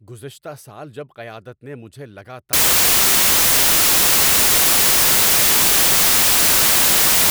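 Right after "قیادت نے مجھے", at 2.53 s, the speech collapses into loud, harsh broadband noise that runs to the end of the clip. That's samples built from the wrong bytes: each sample's bytes got assembled wrongly, so the jittery low bits dominate.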